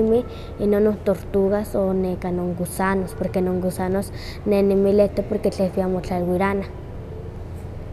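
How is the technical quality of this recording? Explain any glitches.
No glitches can be heard anywhere in the recording; the signal stays continuous and intact throughout.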